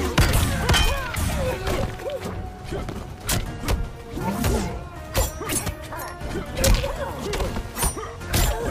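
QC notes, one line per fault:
No technical faults are audible anywhere in the audio, and the signal path shows nothing that calls for correction.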